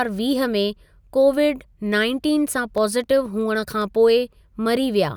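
Just after "कोविड नाइनटिन सां", from 2.78 s to 3.82 s, five CD scratch ticks sound, dry clicks with the longest about a millisecond. A blemish on the disc wiped out more data than error correction could rebuild once per revolution, so the player patched or muted those samples each time around. What separates this from random clicks or packet dropouts is the steady spacing, roughly four per second, with the ticks of uneven strength.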